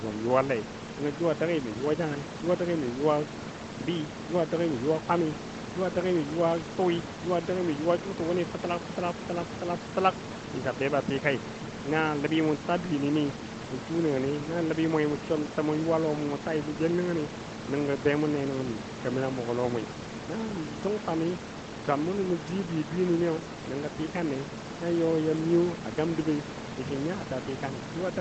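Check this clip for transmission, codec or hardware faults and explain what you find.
No transmission, codec or hardware faults can be heard in this speech recording. The sound stops at about 8 kHz, as expected from the call's microphone processing and codec, and the room noise stays roughly 11 dB below the speech.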